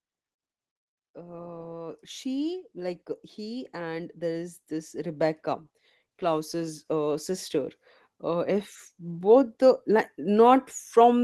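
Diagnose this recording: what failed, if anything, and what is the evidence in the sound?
Speech and background swell together from 1.13 to 5.46 s, by about 9 dB, and again after "uh sister" from 8.22 s to the end: automatic gain rising in call processing, lifting a quiet input.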